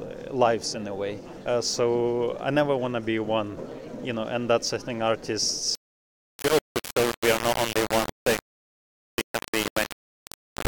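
From 5.75 s to the end at 10.67 s the audio turns harsh and grainy, with quantisation noise almost as loud as the signal itself. This is low bit depth without dither, likely a 3-bit rounding, so the error tracks the waveform and quiet sounds turn gritty.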